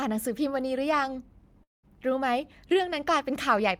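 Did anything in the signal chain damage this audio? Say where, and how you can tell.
Yes, the network stage, most likely a long network dropout. From 1.63 to 1.85 s the speech smears into a fading buzz, then goes near-silent before resuming mid-stream. About 0.2 s never arrives; the receiver just stretches the last sound until it runs dry.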